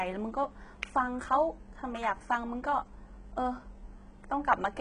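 Likely HE-AAC compression at a very low bitrate, around 12 kbps, rebuilds the treble from copied lower bands throughout, causing heavy damage: nothing above 10.9 kHz, with gritty, metallic or lispy s sounds.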